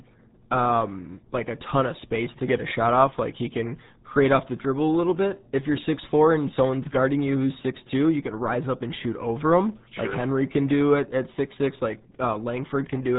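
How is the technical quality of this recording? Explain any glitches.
Technical quality is poor: the whole speech recording carries the damage of the RealAudio 14.4 codec. From start to finish, nothing above about 3.8 kHz survives, so the speech sounds muffled, with a gargling, watery texture on every syllable. This low-bitrate speech coder, built for dial-up modems, models the voice crudely, and the heavy damage fits an 8 kbit/s stream. On a spectrogram, energy stops at a hard ceiling near 3.8 kHz, with smeared, blotchy harmonics beneath it.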